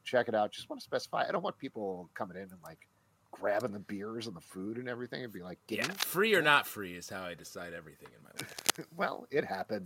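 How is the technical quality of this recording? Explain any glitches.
The recording has two brief glitches of the same kind, both cable scratch noise. From 5.82 to 6.03 s and again from 8.37 to 8.83 s, a worn lead or connector was likely being moved, making its contact resistance jump erratically. That injects dense, ragged bursts of scratching, roughly as loud as the sound itself.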